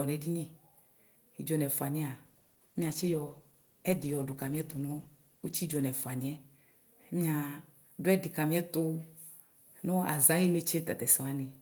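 From 2.26 s to 7.17 s the speech degrades in a call bitrate drop. The encoder was pushed from what sounds like 32 kbps down to roughly 13 kbps, bottoming out for about 3.4 s, so it codes far more coarsely and sounds rough, watery and muffled. On a spectrogram the upper band thins out and cuts off sharply across this span, with smeared, blocky texture below, before full bandwidth returns. The waveform envelope barely changes.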